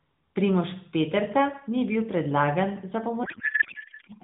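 A codec payload misread takes over this speech clip from 3.24 s to the end at 4.23 s, right after "ni bil predlagan za". The speech gives way to garbled noise and warble that barely tracks it, because frames packed in AMR's octet-aligned layout are being read as bandwidth-efficient, shifting every field out of place. The surrounding audio carries the band-limited, lightly coded character of AMR narrowband mobile coding, which fits its 12.2 kbps mode.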